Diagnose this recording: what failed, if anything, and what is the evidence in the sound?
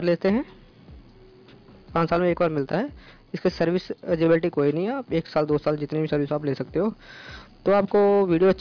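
Nothing here points to a failure at any stage, so there's no fault to diagnose and nothing in the sound to flag.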